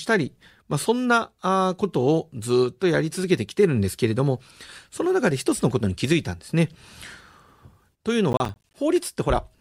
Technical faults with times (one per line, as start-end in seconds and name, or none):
8.32-8.74 processor overload crackle